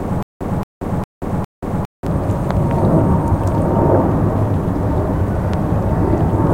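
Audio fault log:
0.00–2.07 s, stutter with silent gaps: The clip opens mid-stutter. A short burst of about 0.23 s plays, then drops into dead digital silence for about 0.18 s, and the same burst comes back every 0.41 s, four times in all. This is likely a stalled player or stream that replays its last buffered fragment at each retry and then runs dry. The audio that should have filled this stretch never arrives.
2.51–2.73 s and 5.54 s, loud pop: Sharp pops cut in over the ongoing sound, which carries on underneath. The first event is a quick double pop, and the second is a single one. Each peaks about 10 dB above the surrounding audio. The likely cause is a sudden voltage step or pulse, such as a plug, a switch, static or a driver glitch, which the downstream circuits shape into a brief transient.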